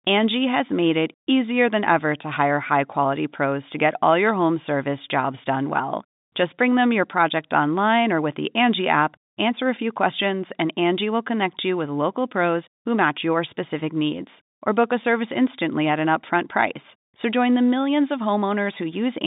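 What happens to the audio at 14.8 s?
At 14.8 s the speech carries on intact, with only the usual telephone-band sound of G.711 coding and nothing breaking into it.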